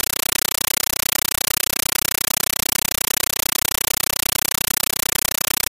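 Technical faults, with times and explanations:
Throughout, compressed stream played as audio: the speech is replaced by very loud, harsh, chattering static. The encoded AC-3 frames are being treated as ordinary samples rather than decoded, so each frame comes out as a burst of noise about 9.3 ms long followed by zero padding, repeating 31.25 times a second. The burst length fits a 448 kbps stream. On a waveform this shows as loud blocks separated by flat silence every 32 ms. On a spectrogram it appears as broadband vertical stripes at that spacing.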